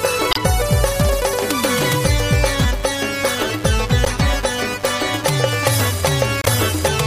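Mains buzz at 50 Hz runs from the first instant to the last, sitting roughly 20 dB below the wanted sound. Sharp switching spikes from a dimmer, rectifier or unshielded lead entered twice per mains cycle, so the hum carries a dense ladder of 50 Hz harmonics climbing into the kilohertz range. That upper spread is what makes it a raspy, steady buzz rather than a soft low hum.

A corrupt frame decoded at 0.31 to 0.38 s, again at 4.05 to 4.10 s, and once more at 6.42 to 6.50 s. Each time, flipped bits in the compressed stream were played anyway, so misread gains and codes threw energy onto the wrong frequencies for the span of the damaged frames, likely two or three each time. The result is a short chirp, squeak or burst of noise. The first and last are the strongest, and the middle one is a few decibels lower.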